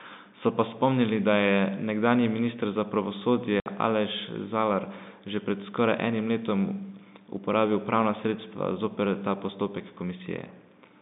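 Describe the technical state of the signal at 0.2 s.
At 0.2 s the audio is intact, with the speech carried cleanly through its G.711 telephone coding and confined to the usual narrow phone band of roughly 150 Hz to 3.7 kHz.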